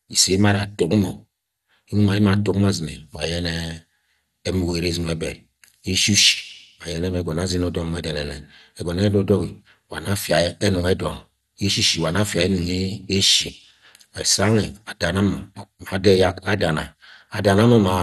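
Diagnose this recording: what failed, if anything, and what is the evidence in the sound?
MP2 compression, throughout the speech, is the likely cause at the codec stage. Nothing is present above 12.2 kHz, and the plainly audible dull, gurgling grain comes from upper sub-bands dropping out and coarse quantisation in the rest, which fits a bitrate near 64 kbps.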